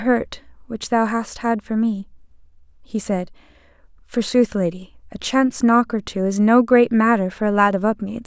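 Nothing technically wrong turns up anywhere in this short speech recording, so there's really no fault here to point to.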